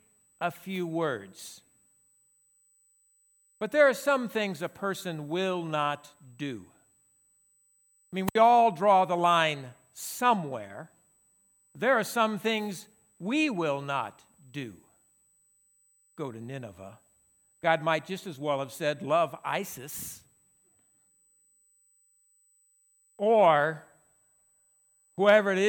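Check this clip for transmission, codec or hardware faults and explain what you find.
A USB whine runs through the speech from start to finish. It is a steady 8 kHz tone, roughly 40 dB below the speech. Current drawn in 125-microsecond USB microframes leaks through power or ground into the audio path. It sounds like a thin, fixed high-pitched whistle. A spectrogram shows an unbroken horizontal line at 8 kHz.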